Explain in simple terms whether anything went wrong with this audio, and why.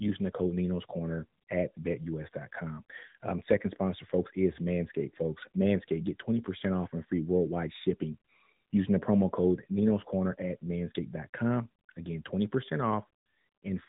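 AMR narrowband mobile codec damage runs through the whole clip, from start to finish. The speech was squeezed through an old-style phone codec that rebuilds the voice from a simplified model. Everything above about 3.8 kHz is gone, so it sounds muffled, thin and plainly buzzy.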